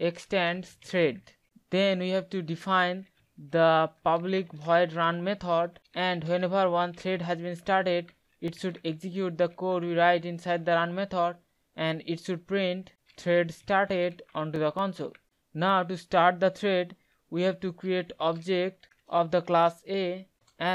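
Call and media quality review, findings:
CD scratch ticks, 8.03 to 9.16 s and 14.11 to 15.92 s: short clicks, up to about 3 ms, about five a second. Scratch beats error correction once per disc turn; player patches over.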